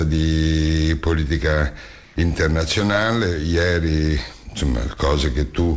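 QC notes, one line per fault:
2.04–2.16 s: comfort noise in place of the background. For 120 ms the quiet background becomes steady and featureless, shifting about 2 dB, likely synthetic fill during a transmission pause.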